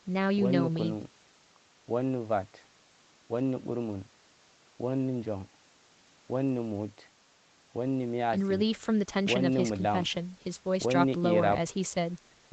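No technical faults can be heard in this speech recording.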